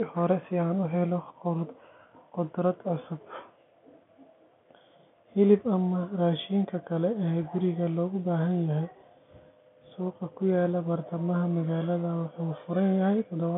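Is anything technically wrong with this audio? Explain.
No, nothing is technically wrong with this speech.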